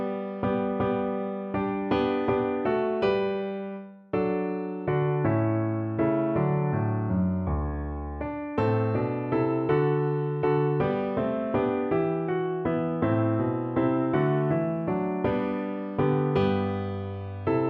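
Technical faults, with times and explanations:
14.15–15.65 s, sample clock jitter: for about a second and a half the converter's clock wanders, taking each sample a fraction of a microsecond early or late, on the order of 0.7 µs. Where the waveform is steep, that timing slip becomes an amplitude error, so a faint hiss rides along with loud and bright passages and disappears in quiet ones, roughly 55 dB below the signal. A spectrogram shows a low noise haze tracking the louder, higher-frequency energy, while the waveform looks unchanged to the eye.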